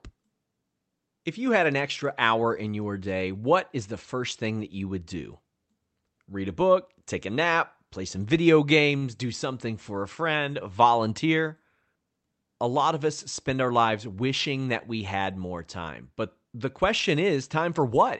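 At 8.97 to 9.04 s a packet arrived late and the jitter buffer ran dry, causing a short stall from a late packet. The receiver filled the gap by stretching the last stretch of speech for 43 ms, then resumed exactly where it had stopped once the packet came in, so nothing is lost. What you hear is a sound held slightly too long, with a faint buzzy or dipping quality as the stretch plays out.

From 13.50 to 14.09 s the buffer had built up more delay than it wanted, and the jitter buffer sped up to drain it. It cut out short pitch-period-sized pieces repeatedly, about 50 ms in total, so that span plays at 107 % speed. The pitch stays put, but the speech sounds slightly rushed. Beneath both faults runs the Opus call path at 32 kbps, with its coding noise and a high-frequency cut-off near 8 kHz.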